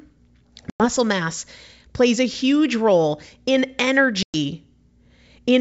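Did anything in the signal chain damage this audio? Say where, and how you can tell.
Yes, the network stage damaged it: packet loss on an ADPCM call. At 0.70 to 0.86 s, just before "mass plays a huge", and at 4.23 to 4.35 s, right after "a huge role in", the speech drops into hard-edged silence of about 100 and 110 ms, around ten packets each. Unlike a buffer underrun, the G.722 decoder's adaptive predictor and step size lose track of the sender's, so speech resumes slightly distorted before settling.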